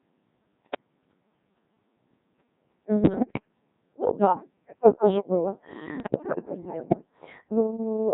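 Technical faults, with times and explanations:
Throughout: Codec 2 vocoder at 1.6 kbit/s, with heavy damage. Only pitch, voicing, energy and a coarse spectral envelope survive, and the decoder rebuilds speech from sine waves, hence the robotic buzz. The spectrogram shows smoothed harmonic stacks without natural noise detail, and the waveform looks synthetic.
0.62–0.88 s, 3.04–3.48 s and 6.00–7.06 s (the last right after "да такое тоже было"): bit errors on digital voice radio, at roughly 7 to 10 percent. Corrupted frame parameters make pitch, level and timbre jump into warbles and bleeps. The spectrogram shows harmonics and energy jumping abruptly from frame to frame.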